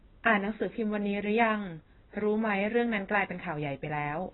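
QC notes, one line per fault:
Throughout, AAC compression: the speech sounds dull and muffled, with nothing above 4 kHz, and a heavy watery warble and fizz on sustained vowels and sibilants. The likely cause is a low-bitrate AAC encode, which fits a rate around 16 kbps. At that rate the encoder pulls the band limit down and starves each frame's frequency lines of bits. Detail is coarsely quantised, leaving spectral holes and substituted noise that smear the sound.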